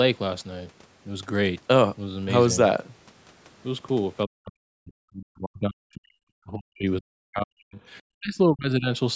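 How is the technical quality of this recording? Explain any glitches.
The recording has one recurring problem: the speech is cut down in three stretches from about the middle onward, while the call processing limits the band to 8 kHz, which fits a 16 kHz sample rate.

Speech suppressed in double talk occurs from 4.26 to 6.22 s, 6.44 to 7.8 s and 8.17 to 8.89 s. The level dips by up to about 40 dB in the first two and about 30 dB in the last, for roughly two seconds, one second and under a second of affected sound. The likely cause is an echo canceller that couldn't tell the near talker from returning loudspeaker echo while both sides spoke, so it turned everything down. Unlike packet-loss dropouts, which are brief, abrupt gaps, these are longer, uneven dips.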